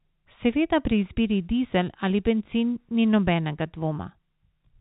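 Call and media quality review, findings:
No faults found.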